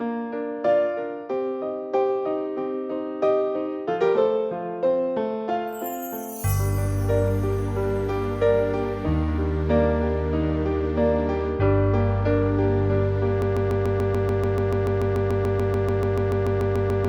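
A stall in the playback or streaming chain, most likely a player, encoder or stream that stopped receiving new data and kept resending the last fragment it held, produces a broken-record loop from 13.42 s to the end of the clip. The sound turns into a short 145 ms slice repeated back to back about 25 times, a rapid mechanical stutter with no variation between cycles, and whatever should have played after 13.42 s is missing entirely.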